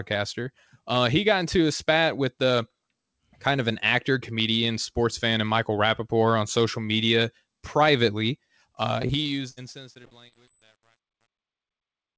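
Truncation distortion on a fade begins at 8.77 s, just after "on social media privately", and runs to the end of this speech clip. The fade-out starting at 8.77 s falls smoothly in level, but the stage carrying it keeps too few bits and adds no dither, which fits roughly 9-bit resolution. As the level sinks toward the smallest step, the waveform turns into coarse square steps, so from 9.37 s the tail turns gritty. Repeated packet loss with a robotic sound overlaps it from 9.02 s to 10.49 s. Nine separate holes, the longest 60 ms, are each patched by extending the previous sound, and the next hole follows soon after. About 16% of that stretch is concealed rather than real audio, giving a choppy quality with pieces missing. The call codec's band limit leaves nothing above 8 kHz throughout.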